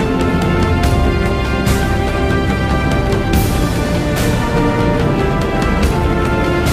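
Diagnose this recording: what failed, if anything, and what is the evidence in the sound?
Nothing in the capture, conversion, processing, transmission, storage or playback chain shows a failure, and there's no audible evidence of any fault at any point in the recording.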